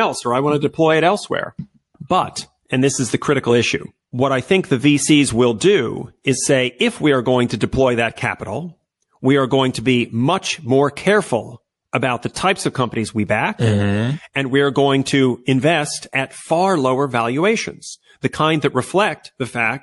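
Across the whole of the speech there is a watery, swirling quality, with metallic chirping on the s sounds, dulled treble and softened consonant attacks, and it is plainly audible. This is most likely MP3 compression at a low bitrate, the damage fitting something near 48 kbps. Short of bits, the encoder cuts off the upper frequencies and lets weak spectral lines drop in and out from frame to frame, which produces the swirl and chirps.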